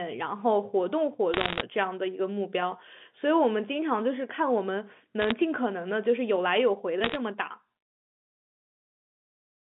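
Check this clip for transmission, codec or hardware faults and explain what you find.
Bit errors on a digital phone line occur at 1.34–1.62 s, 5.20–5.32 s and 7.04–7.16 s. Flipped bits corrupt single samples on the G.711 mu-law line, and a hit on a high bit or on the sign of a loud sample produces a sharp tick. They cluster into crackle over the speech, and the first burst is densest, with roughly one bit in seventy wrong. The band-limited telephone sound itself comes through unaffected.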